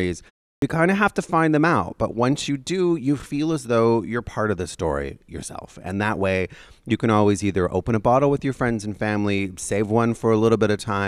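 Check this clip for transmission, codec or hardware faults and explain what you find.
One fault is audible, a clipped start after a pause. From 0.58 to 0.62 s, after a 0.36 s pause, the sleeping output wakes late and drops 42 ms, so "kind of have to" begins abruptly, its first sounds missing.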